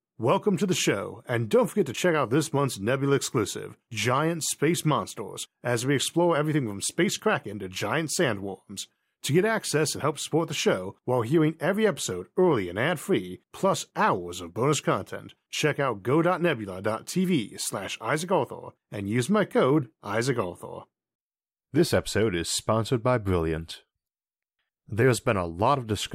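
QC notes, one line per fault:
Nothing stood out on listening to this speech recording.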